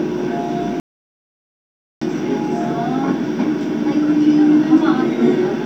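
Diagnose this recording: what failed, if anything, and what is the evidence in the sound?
The sound cuts to dead silence from 0.80 to 2.02 s, about 1.2 s, with no room tone: an audio dropout to silence, likely an input link loss while the recorder kept writing silence.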